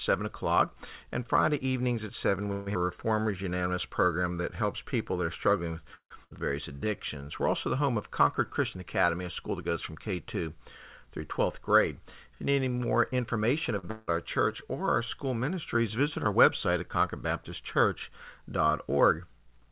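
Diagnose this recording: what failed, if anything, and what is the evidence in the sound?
At 2.52 to 2.68 s and again at 5.95 to 6.12 s the speech stops moving forward and the last sound hangs on as a fading buzz. In the second case, the buzz dies into about 100 ms of silence before the speech resumes. Nothing is lost afterwards. This is a call audio freeze in the network and buffer stage, likely packets held up in transit so the jitter buffer ran dry. The receiver filled 140 ms and 154 ms, pushing the playout delay later by that much.

Right after each freeze the speech lurches forward. At 2.74 s it jumps almost seamlessly past roughly 70 ms of audio. At 6.24 to 6.33 s there is a short 65 ms fill and then a jump past roughly 150 ms. These are skip-ahead events. Once the delayed packets arrived, the jitter buffer was holding too much, so it discarded a stretch of queued audio to pull the delay back down, by about 70 ms and about 100 ms respectively.

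From 2.79 to 3.43 s and from 6.73 to 7.25 s the speech drags, with vowels drawn out but the pitch unchanged. This is jitter buffer slow-down in the call processing stage. Running low after the skips, the receiver repeated single pitch periods over and over to rebuild its reserve. It added 82 ms and 80 ms, so playback ran at 88% and 86% of normal speed.

Between 11.44 and 13.72 s the speech runs slightly fast, at 104% of normal rate with no pitch change. This is jitter buffer speed-up. The buffer held more audio than its target, so the receiver trimmed short slices of one or a few pitch periods, repeatedly, across that span. Roughly a tenth of a second was cut in total to bring the delay back toward its target.

At 13.79 s one sound is held too long for a moment, with a slight buzzy quality, and then carries on from where it stopped. This is a short stall from a late packet in the buffer stage. 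A packet was not there when it was due, so the receiver stretched the last sound by 42 ms until it turned up. No audio was lost, and the delay grew by that amount.

From 13.91 to 14.09 s the sound turns into a fading buzz for about 165 ms. When the speech returns, it has moved on without the 160 ms that should have played in between. This is a long network dropout, likely a burst of packets that never arrived. The receiver concealed the gap by extending the last sound, then resumed with the later audio. Throughout, the call path cuts everything above 4 kHz, which points to G.711 A-law at 64 kbps.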